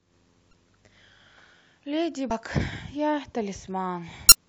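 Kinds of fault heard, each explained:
Damaged data in a compressed stream: three short glitches cut into the speech at 0.50 to 0.53 s, 2.28 to 2.31 s and 4.29 to 4.34 s. Corrupted bytes make the decoder misread those frames and lose sync until it finds the next valid frame header.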